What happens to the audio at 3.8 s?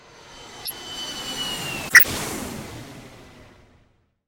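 Nothing goes wrong at 3.8 s; the audio plays through that moment intact, with no dropout, click or other fault.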